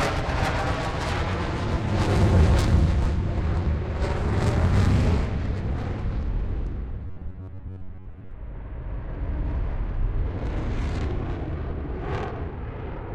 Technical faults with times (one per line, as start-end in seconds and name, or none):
7.07-8.31 robotic sound from repeated short buffers